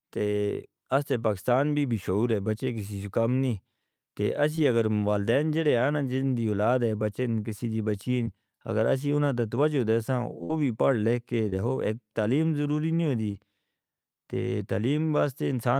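Short concealed packet loss hits this speech at 4.55 s and at 8.23 s, after "ہے بچے کسی دی": about 20 ms of the call arrived too late, and the receiver stretched the preceding sound over the hole, leaving a brief smear or wobble before "اگر اس ہی انہاں". At 10.44 to 10.51 s, following "تے توجہ دے سان", a burst of packet loss drops about 60 ms. The last sound is continued and faded, a short held buzz or hiss, before "بھی پڑھ لکھ کے" resumes with audio missing. The short kind returns at 11.49 s, after "بھی پڑھ لکھ کے", and at 13.32 s.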